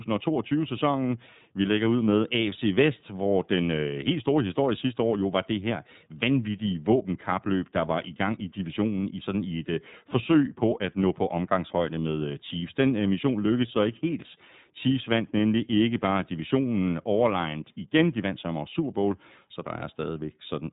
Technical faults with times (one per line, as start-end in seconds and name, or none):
0.00-20.72 iLBC codec